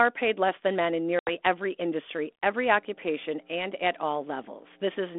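A short speech recording carried over a G.726 ADPCM line, with the narrow telephone band you'd expect at 32 kbit/s. The first problem is packet loss on the ADPCM call: right after "less than men in" there's a hard-edged dropout from about 1.19 to 1.31 s, roughly 80 ms of audio gone, which fits several packets going missing in a row. The gap gets filled with silence, and because ADPCM only sends differences from an adaptive prediction, the receiver's predictor and step size lose sync with the sender's. That's why "every industry every" comes back slightly distorted before the decoder settles. The second problem is mains hum. From about 2.75 s to the end there's a steady 60 Hz tone, sitting about 15 dB below the speech. That points to a ground loop or a nearby transformer leaking the power line into the signal chain.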